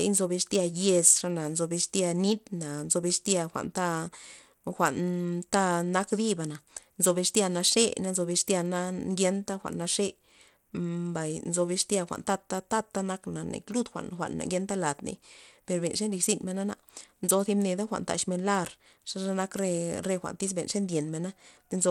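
A speech recording with plainly audible codec damage from start to finish: the treble thins and flickers in and out, a gritty grain clings to the sound, and aliasing adds a metallic edge, with nothing present above 19 kHz. The likely cause is Bluetooth SBC compression at a low bit pool, which fits a rate near 96 kbps. SBC's simple allocation starves the weak upper sub-bands and coarsely quantises the rest.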